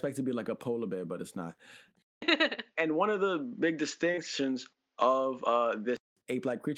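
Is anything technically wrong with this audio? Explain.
Yes, two problems. Right after "bear but it's not", at 2.02 s, there's a 200 ms gap, then everything above 7.1 kHz is gone, the level shifts by about 5 dB, and a faint new noise floor appears until 6.17 s. That's likely an input switched to a poorer device. Inside that stretch, from 4.11 to 4.19 s, there's short concealed packet loss: two back-to-back 20 ms gaps were filled by extending the preceding sound, leaving a brief smeared wobble.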